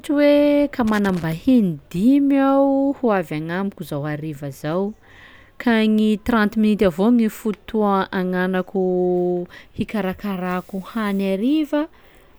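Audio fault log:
0.87–1.33 s, loose connector crackle: an irregular burst of scratchy crackle breaks up the speech for just under half a second. A worn or dirty contact is flickering between open and closed as it shifts, chopping the signal on and off, with pops wherever the line carries DC.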